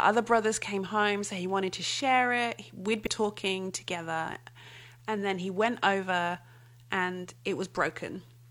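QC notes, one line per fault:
3.02–3.07 s, damaged data in a compressed stream: a brief glitch of about 50 ms breaks into the speech where the decoder hits corrupted bytes, misreads the frame, loses sync and hunts for the next valid header before playback settles. Unlike a plain dropout, the fault here comes from damaged compressed data throwing the decoder off.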